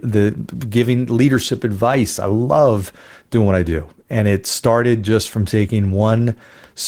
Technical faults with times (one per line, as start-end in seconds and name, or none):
none